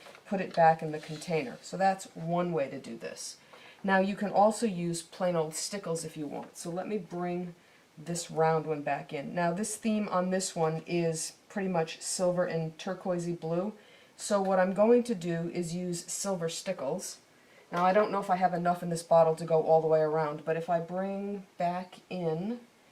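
No technical faults are audible.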